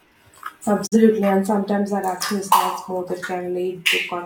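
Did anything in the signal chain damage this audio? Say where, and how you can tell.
Yes. A digital broadcast dropout hits the reception stage. The speech fades out over about 20 ms at 0.86 s. Silence holds until 0.97 s, just before "and sometimes our action". The receiver muted on bad data. Roughly 43 ms of audio is gone, which fits one lost frame.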